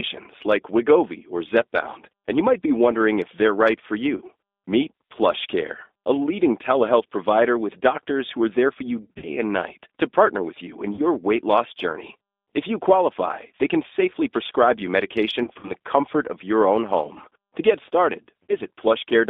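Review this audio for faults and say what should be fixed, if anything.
The whole call runs through the G.729 codec at 8 kbit/s, so the speech is squeezed into a narrow telephone band of about 250 Hz to 3.6 kHz and rebuilt from a filter and a few pulses, which gives that rough, synthetic edge. Use a wideband codec such as G.722 or Opus instead.

VoIP packet loss concealed by the speech codec shows up at 4.16–4.22, 9.02–9.27, 10.95–11.03, 15.43–15.72 and 18.43–18.56 s, where the decoder stretches its last frame into a fading buzz or noise. The worst stretch is around 9 s, with about 160 ms missing. A jitter buffer with FEC or redundancy would cover these.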